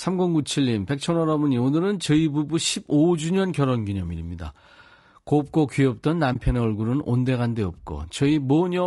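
Throughout, the speech sounds rough and grainy, with a noisy haze filling the gaps between the pitch harmonics. This is likely low-delay AAC compression of the AAC-ELD kind, whose short frames resolve harmonics poorly. The plainly audible damage fits a bitrate around 32 kbps.

From 6.33 to 6.36 s the sound fades out and back in, leaving a brief dip. This is AAC frame loss with muting. The decoder zeroed about 20 ms of lost audio, roughly one frame, and its overlapping windows smoothed the edges.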